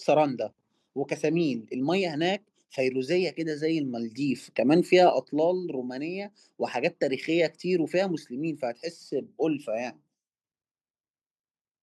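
Microphone overload at 4.96 to 5.06 s: for this tenth of a second the loudest peaks of the speech flatten against the converter's ceiling, driven about 1 dB past full scale. A small fraction of the waveform is sheared off, adding a brief harsh, crackly edge. The likely cause is an input volume set too high.

Microphone volume stepped down at 5.1 s: immediately after that distorted peak, the speech and the background both drop abruptly by about 5 dB in a single step. This sudden level change points to the call software reacting to the clipping and cutting the device's input volume.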